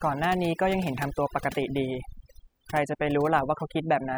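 From start to finish the gaps between phrases fall to near silence dotted with twinkling specks. This is overdone noise removal: a noise reducer set too strong shuts off individual frequency bands near its noise estimate, taking quieter parts of the voice too.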